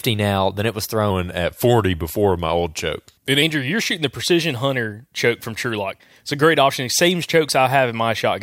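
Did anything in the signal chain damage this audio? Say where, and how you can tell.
Yes, at the playback stage: from 1.1 to 3.42 s the speech drops about 1.5 semitones and slows to 0.919 speed, a wrong sample rate consistent with 48 kHz audio clocked at 44.1 kHz.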